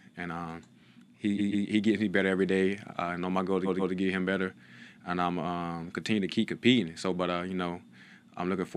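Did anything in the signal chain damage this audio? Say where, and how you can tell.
Yes, at the codec or storage stage: repeated frames. From 1.37 to 1.65 s and again from 3.65 to 3.93 s, a 139.3 ms block of sound plays twice more, each time adding 278.6 ms, which fits a run of three compressed frames written out again. The result is a stutter. On a waveform the identical block appears three times in a row, and a spectrogram shows the same pattern tiled.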